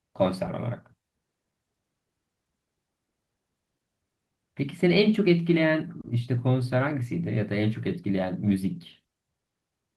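Clock drift between sender and receiver runs through this speech clip: the sending side's clock is roughly 2 percent slow, so the receiver's jitter buffer keeps draining slightly faster than it is refilled. Because the shortfall never stops accumulating, the receiver has to keep compensating for the whole length of the clip. The result is a faint unsteadiness in pacing rather than one clear defect at any single point. Repeated timing corrections from 1.02 s to 9.39 s are how the receiver compensates: it repeatedly stretches short pieces, so the speech plays at about 98 percent of its original pace. Over that stretch roughly a fifth of a second of extra material is inserted, always in the lengthening direction but at uneven spacing. Each correction is small, so any audible trace is just slight hiccups or an unsteady tempo. A short stall from a late packet occurs at 6.01 to 6.06 s, when a packet missed its slot and the jitter buffer briefly ran dry. 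The receiver held the last sound for about 30 ms until the packet arrived, then resumed where it had stopped, so nothing is lost. The delay grew by 30 ms, heard as one sound lingering a moment too long with a slight buzzy dip. The call codec path cuts off content above 12 kHz, as expected for a low-bitrate Opus stream.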